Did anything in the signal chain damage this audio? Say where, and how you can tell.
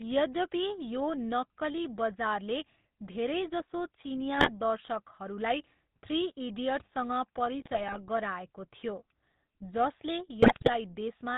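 Yes, two things, both in the codec and network stages. The whole clip carries GSM full-rate codec damage. There's a steady buzzy, gravelly roughness on the speech and nothing comes through above 4 kHz. That's the old vocal-tract model at work: it rebuilds the excitation from sparse, regularly spaced pulses, so the fine detail of the voice is gone. The coarseness fits the 13 kbps full-rate coder.

On top of that there are three bursts of GSM bit errors, at 4.35 to 4.50 s, 7.60 to 7.98 s and 10.42 to 10.69 s. In each one the speech breaks into squawks, pops and gargling. Corrupted bits got through a weak radio link into the decoder. When the filter, pitch or gain parameters come out wrong, the spectrum warps or the level jumps, frame after frame while the burst lasts. The rough density fits a bit error rate of a few percent.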